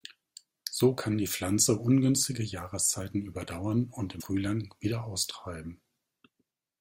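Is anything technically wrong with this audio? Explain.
Yes. At about 4.19 to 4.22 s, just after "überdauern und", the speech has a break that points to a broken MP3 bit reservoir. The likely cause is a cut in the MP3 stream: the frame after the gap reaches back into earlier frames for borrowed data and decodes bytes belonging to a different frame. The speech jumps ahead, and a roughly 30 ms stretch, about one 26.1 ms frame, is damaged at the join.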